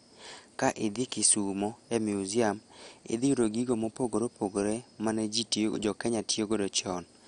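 Speech throughout, dull and gurgling with granular distortion, likely from heavy MP2 compression at a rate sounding near 56 kbps; a spectrogram shows nothing above 11.2 kHz and flickering, blocky sub-bands.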